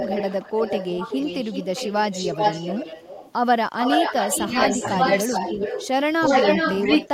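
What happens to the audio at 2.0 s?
At 2.0 s the speech sits inside an echo leak spanning 0.0 to 3.33 s. A loudspeaker's output was likely picked up by a microphone and not fully cancelled, so a second copy of the speech trails the original by 374 ms, roughly 10 dB quieter.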